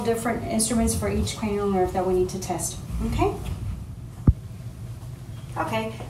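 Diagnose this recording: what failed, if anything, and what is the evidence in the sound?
No fault found in this recording.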